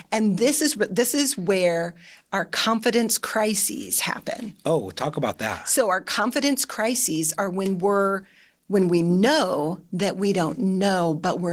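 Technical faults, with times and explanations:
Throughout, Opus voice compression: the codec runs in hybrid mode, coding the speech below 8 kHz with its linear-prediction layer and the band above that with a CELT layer, at a rate that points to roughly 16 kbps in 20 ms frames. The excitation is coded coarsely, so the speech sounds plainly hoarse and slightly robotic. The upper band keeps its full width.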